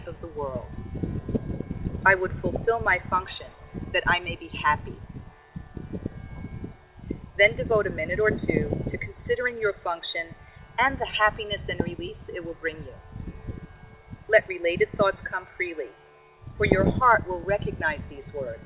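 No technical faults can be heard: the audio arrives over a call path with nothing above 4 kHz, a narrowband limit that fits G.711 mu-law at 64 kbps.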